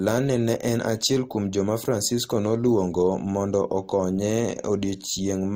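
A short speech recording with nothing technically wrong with it.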